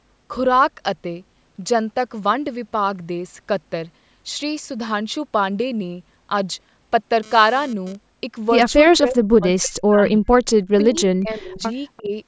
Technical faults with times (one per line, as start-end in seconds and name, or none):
7.23-7.95 GSM phone buzz
8.92-10.29 speech suppressed in double talk
10.83-11.61 speech suppressed in double talk
11.53-11.61 echo leak
11.97-12.02 echo leak
12.01-12.12 speech suppressed in double talk